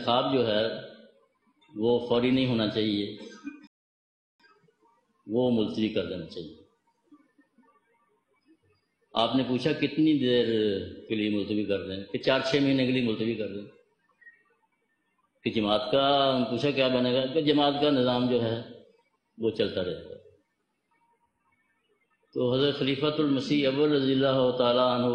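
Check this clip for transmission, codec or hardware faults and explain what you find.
One fault: a rebuffering stall from 3.67 to 4.40 s, where playback ran dry, went silent for 724 ms, then resumed exactly where it stopped, losing nothing but adding time.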